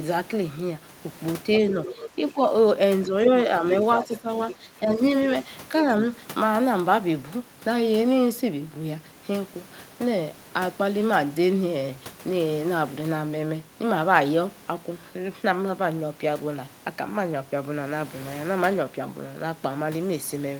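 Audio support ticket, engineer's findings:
Other side's voice leaking through: second voice audible under near-end speech at 1.53–2.31 s (about 15 dB down), 3.26–3.31 s (about 10 dB down), 4.03–4.18 s and 4.51–4.55 s (both about 15 dB down). Brief scraps after the first stretch. Likely cause: acoustic echo canceller leaving residual far-end loudspeaker pickup in the mic signal.

Speech suppressed in double talk: near-end level dips while both sides speak. Dips at 2.06–2.39 s (up to about 10 dB, roughly 150 ms affected), 3.06–3.65 s (shallower, about 5 dB, roughly 200 ms), and 4.05–5.0 s (up to about 10 dB, around half a second). All overlap the leak periods. Likely cause: echo suppressor misreading double talk and attenuating the talker along with the echo.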